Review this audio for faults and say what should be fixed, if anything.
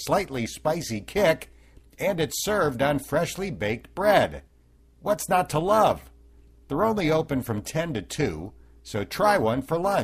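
A fast, buzzy flutter runs through the whole speech clip, giving it a metallic, robotic buzz. This is overlap-add ripple. The audio was split into windowed frames and rejoined with an overlap whose windows don't add up to a steady gain, so the level swells and dips about 6 dB once per frame. The ripple repeats around 300 times a second, which puts the flutter in the audible pitch range and makes it sound grainy rather than like a slow wobble. To fix it, reprocess with a window and hop size pair that satisfies the constant-overlap-add condition, such as a Hann window at 50 or 75 percent overlap.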